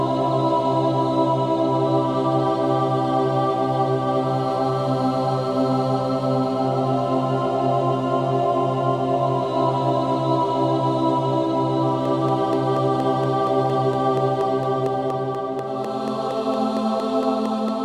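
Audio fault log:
12.05–17.69 s, train of clicks: a steady ticking rides on top of the sound at about 4.3 clicks per second, evenly spaced, around thirty in all, each a sharp pop of the same shape peaking roughly 5 dB above the surrounding audio, so they stand out and carry on through pauses too. The regular, identical pulses point to something outside the sound injecting a repeating spike, likely interference from nearby equipment or a faulty connection or power supply.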